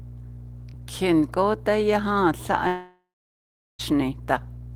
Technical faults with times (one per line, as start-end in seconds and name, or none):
2.67-3.81 long network dropout